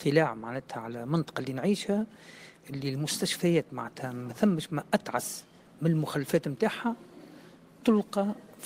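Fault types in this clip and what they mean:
No technical faults are audible.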